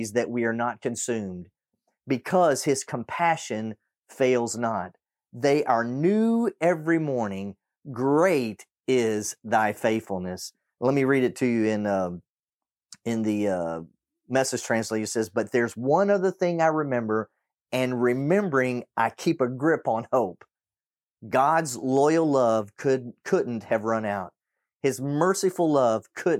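Nothing in the recording stood out as a technical problem on listening.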